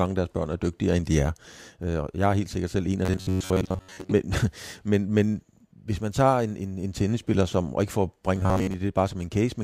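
Audio likely arrived too seldom, so the player kept replaying a short stretch in place of most of the real speech. The result is robotic sound from repeated short buffers: a rigid, metallic buzz at 93.8 Hz, which fits a buffer of about 10.7 ms. It runs from 3.05 to 4.09 s, right after "sikkert selv en af", and again from 8.35 to 8.74 s, after "og ikke for at".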